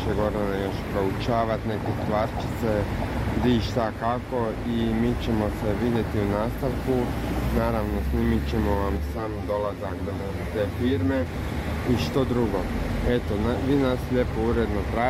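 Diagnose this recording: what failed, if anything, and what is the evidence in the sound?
From 8.97 to 11.26 s the sound turns hollow and phasey, which points to channel delay (comb filtering) at the driver or buffer stage. One channel lags by around 10 ms, and summing to mono cancels evenly spaced bands starting somewhere near 40 Hz.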